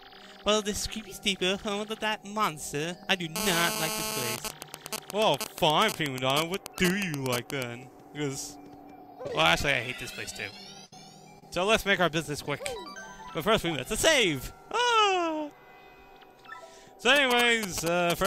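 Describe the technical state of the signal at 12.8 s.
At 12.8 s the signal runs cleanly, with no dropout, distortion, noise burst or other fault audible at that moment.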